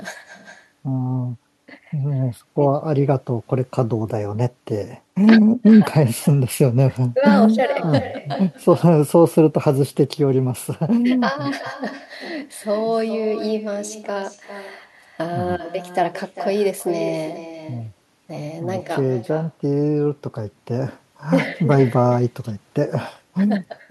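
Throughout the recording, the far end is playing the call through a loudspeaker, its microphone is picking that playback up, and no echo canceller removes it before it is sent back. The result is echo with no canceller: every phrase of the speech returns around four tenths of a second later, about 11 dB quieter and thinner than the original, trailing each utterance like a faint second talker repeating it.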